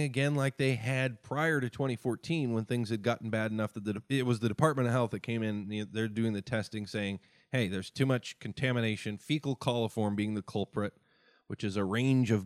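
Speech recording with no audible technical faults anywhere.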